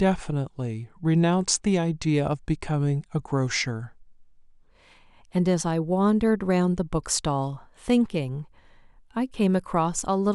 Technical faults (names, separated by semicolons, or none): section at the wrong speed